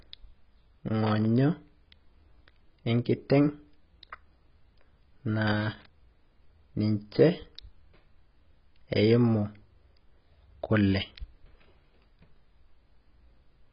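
AAC compression runs through the whole clip, from the first moment of speech. Nothing is present above 5.3 kHz, so the speech sounds dull and boxed in. Sibilants come out as a smeared, fizzy hiss, and sustained sounds carry a warbling edge. The cause is likely a heavy low-bitrate AAC-LC encode, which fits a rate near 16 kbps. At that rate the encoder pulls its cut-off down and quantises the remaining bands so coarsely that their detail smears.

Loose connector crackle appears from 1.07 to 1.25 s and again from 5.47 to 5.86 s, the second burst about twice as long as the first. Each is an irregular scratching crackle laid over the speech. It comes from a contact that makes and breaks as it shifts, chopping the signal into fragments. The sound stutters and rasps rather than simply cutting out.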